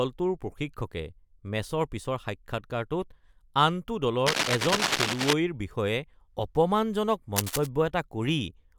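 A worn cable, connector or control is likely being moved, so its contact resistance jumps about rapidly and adds cable scratch noise. From 4.26 to 5.33 s dense, uneven bursts of scratching and rustling sit on top of the speech at roughly the same loudness as the speech. A shorter burst from 7.36 to 7.67 s returns a little quieter than the speech.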